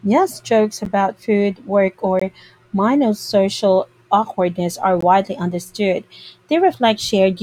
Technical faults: block of digital silence

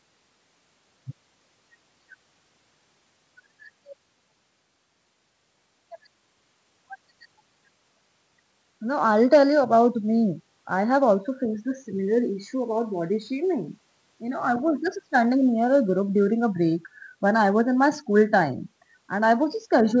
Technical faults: none

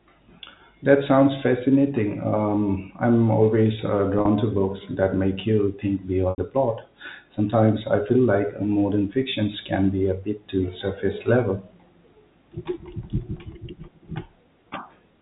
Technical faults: packet loss with pitch repetition

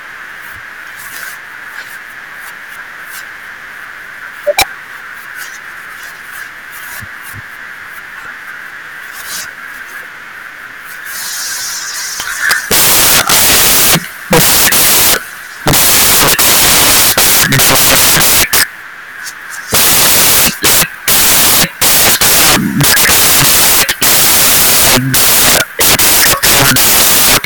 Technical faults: samples built from the wrong bytes

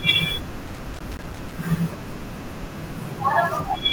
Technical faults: loose connector crackle

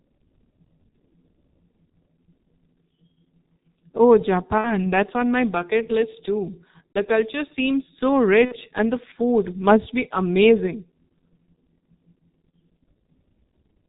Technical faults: G.723.1 codec; VoIP packet loss concealed by the speech codec

